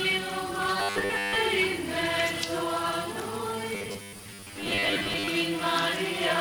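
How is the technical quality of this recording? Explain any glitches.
The recording has two bursts of robotic sound from repeated short buffers, at 0.80–1.36 s and 3.75–5.28 s. Audio likely arrived too slowly, so playback looped a chunk of about 10 ms, covering most of the first stretch and about half the second, and imposing a rigid metallic 100 Hz buzz.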